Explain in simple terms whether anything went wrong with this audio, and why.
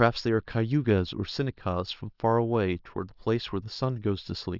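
Nothing went wrong; the recording has no audible faults.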